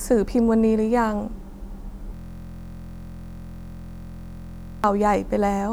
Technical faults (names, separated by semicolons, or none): system hang loop